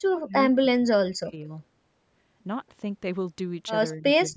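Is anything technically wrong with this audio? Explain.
Yes. The speech is repeatedly pushed down by speech suppressed in double talk, at 0.09 to 0.35 s, 0.58 to 1.5 s, 3.94 to 4.05 s and from 4.28 s to the end. The likely cause is an echo canceller that could not tell this talker apart from loudspeaker echo while the far side was speaking, so it attenuated both. The voice dips sharply, by about 40 dB at its deepest in the second stretch and only around 15 dB in the third. The band limit near 8 kHz comes from the normal call microphone processing.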